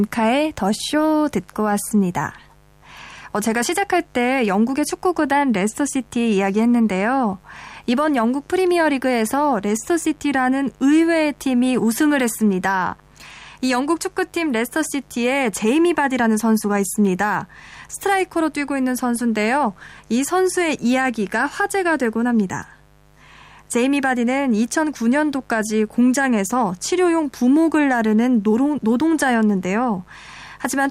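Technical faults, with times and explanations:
Throughout, mains buzz: a steady, raspy buzz runs under the speech at roughly 35 dB below it, built on 50 Hz harmonics. Sharp switching spikes, twice per mains cycle, from a dimmer, rectifier or poor shielding, spread energy from 100 Hz into the kilohertz range.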